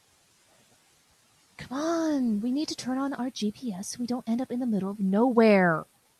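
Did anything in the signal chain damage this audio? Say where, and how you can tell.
Yes, a wrong sample rate at playback: from 0 to 1.63 s the speech drags at 0.919 speed and sits about 1.5 semitones low, which fits 48 kHz material clocked out at 44.1 kHz.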